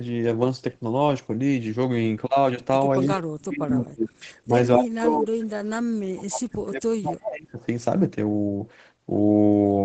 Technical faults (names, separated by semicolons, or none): echo leak; speech suppressed in double talk